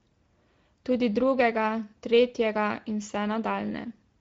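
From start to finish the speech carries clear Speex codec damage. Speex is a CELP coder, and here it's short on bits for the excitation, so the speech comes out noisy and a bit hoarse. The sound points to a mid-range setting of roughly 17 kbps. Nothing gets through above 7.7 kHz.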